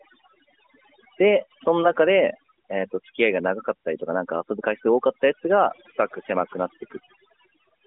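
Throughout the speech, overdone noise removal strips the background down, breaking it up into twinkling specks. On a spectrogram, isolated bins blink on and off between phrases, and energy stays under 3.8 kHz, consistent with the narrowband mobile codec.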